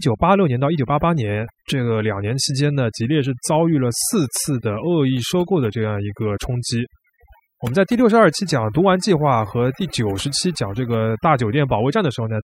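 Throughout the clip, overdone noise removal is at work: a noise reduction stage set far too aggressively pulls individual frequency bands down whenever they sit near its noise estimate, taking quiet speech detail with them. The background drops and breaks up into twinkling specks.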